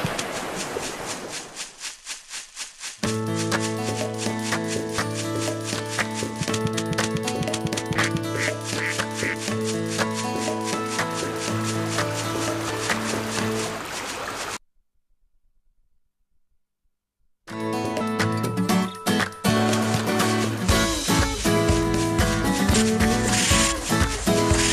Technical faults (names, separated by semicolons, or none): damaged data in a compressed stream